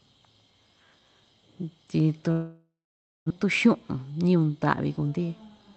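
A long network dropout runs from 2.31 to 3.32 s in this speech. The gap is most likely from packets that never arrived: about 920 ms of the audio is lost outright. The receiver stretches the last sound into a fading buzz, then leaves roughly 560 ms of near-silence before the speech resumes further on, slightly shifted in timing. The concealed stretch, like the rest of the clip, carries the dull top end of a call codec band-limited near 8 kHz.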